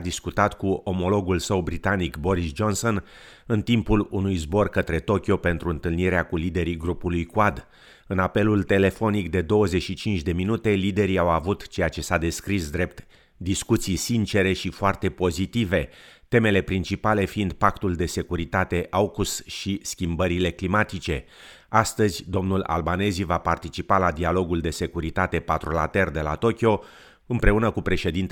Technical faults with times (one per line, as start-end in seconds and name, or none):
none